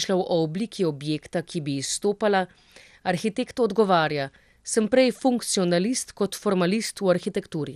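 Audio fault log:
Throughout: MP2 compression. The speech sounds dull and gurgly, with a granular edge, which fits a low bitrate of roughly 80 kbps. A spectrogram shows nothing above 15.1 kHz and upper sub-bands blinking on and off. The likely cause is starved Layer II bit allocation.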